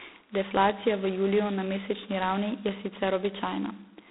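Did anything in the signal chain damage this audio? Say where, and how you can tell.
Yes. The damage is at the codec stage, G.726 ADPCM at 16 kbit/s, through the whole clip. The speech sits in a band of 250 Hz to 3.7 kHz, with nothing above 3.9 kHz. A harsh, rasping hiss rides on the speech and tracks its level. That comes from sending only two bits of prediction error per sample.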